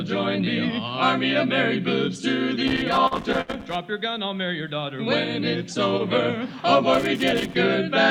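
A worn or dirty contact begins making and breaking at 2.68 s, and this loose connector crackle runs until 3.76 s. Each break chops the signal, and any DC on the line turns the jolts into pops, so the audio is overlaid with an irregular scratching burst lasting about a second. Inside that burst the receiver twice ran out of data because a packet was late. Each time it produced a short stall from a late packet: the jitter buffer emptied and the last sound was held until the packet arrived, then playback resumed where it had stopped. At 3.07 to 3.14 s about 38 ms is filled this way. At 3.41 to 3.65 s about 58 ms is filled. Nothing is lost, but both times a sound lingers too long with a faint buzz or dip, and the delay grows with each stall. The connector faults again from 6.94 to 7.56 s, producing a second, shorter bout of ragged crackle.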